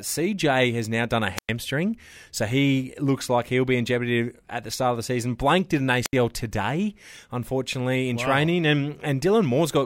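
At 1.36 to 1.49 s, after "has now done a", and at 6.04 to 6.13 s, after "did an", wireless microphone squelch dropouts occur. The radio signal fades, hiss swells, then the receiver's squelch mutes for 103 ms and 71 ms. That rising static before the hole distinguishes it from a clean digital gap.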